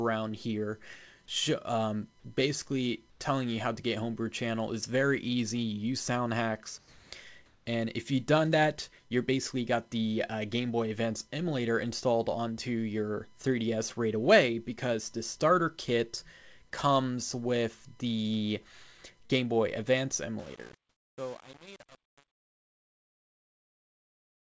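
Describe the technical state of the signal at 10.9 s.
At 10.9 s the signal is intact, with no dropout, click or distortion, only the call codec's band limit at 8 kHz.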